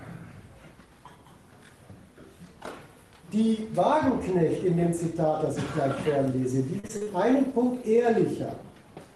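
From 6.79 to 7.08 s, repeated packet loss left several short holes, the longest 39 ms. The jitter buffer patched each by extending the preceding sound, so nearly half that span is concealment, heard as choppy sound with fragments missing.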